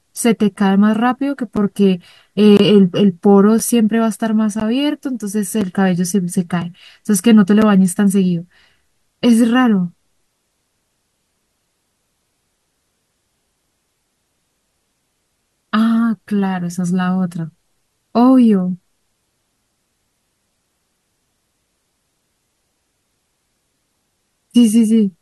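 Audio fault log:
0.56, 1.57, 2.57–2.60, 3.59, 4.60, 5.61, 6.62, 7.62 s: gap between stream segments. Hard-edged silent holes of 3 to 24 ms recur about once per second, which fits 1 s segments whose timestamps leave small gaps the player pads with silence. No audio is lost.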